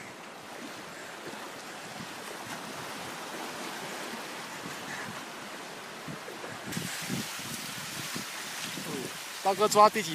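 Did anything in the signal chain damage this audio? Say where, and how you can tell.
Yes: pre-emphasis left on from 6.72 s to the end. The transmission-stage treble boost, J.17-style, was never undone, leaving 10 kHz about 11 dB hot, thin and sibilant.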